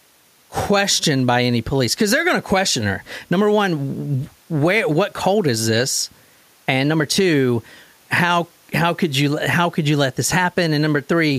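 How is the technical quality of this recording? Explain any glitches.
No glitches or technical faults can be heard here.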